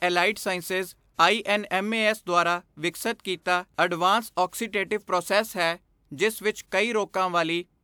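No technical faults can be heard anywhere in this recording.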